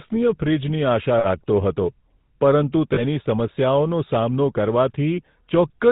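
Throughout the speech, the GSM full-rate codec gives a buzzy, gravelly roughness and a band that stops near 4 kHz. Its plainly audible damage fits a 13 kbps vocal-tract model driven by sparse pulses. Unlike plain band-limiting, it adds that grainy texture.

Lost GSM frames at 1.18 to 1.26 s and at 2.94 to 3.03 s, just after "હતો પરંતુ", hold the previous sound as a short metallic ring for 60 ms and then 40 ms. These repeats are too short to fade to silence, and they ring rather than clicking or dropping out.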